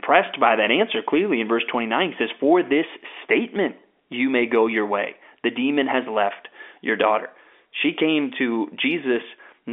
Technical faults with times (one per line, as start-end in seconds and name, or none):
none